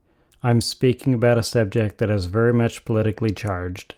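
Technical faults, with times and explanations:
No technical faults heard anywhere in the speech.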